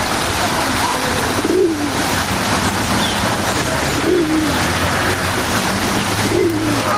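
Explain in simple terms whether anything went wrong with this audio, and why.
Gain pumping runs through the whole recording, from start to finish. The likely cause is an input level set far too high for the microphone, so a fast automatic limiter or compressor keeps pulling the volume down each time something loud arrives and then letting it back up. You can hear the level rise and fall by a large amount, which makes loud and soft moments end up closer together and leaves the sound squashed.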